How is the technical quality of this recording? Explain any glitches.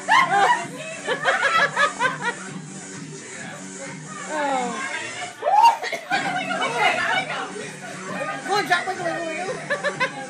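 A short stutter breaks the audio three times, at 4.50–4.52, 7.02–7.05 and 9.55–9.57 s. These are overlapping chunks: the audio was handled in 2.5 s blocks, each starting about 25 ms before the previous one ended, so that sliver plays twice at every join.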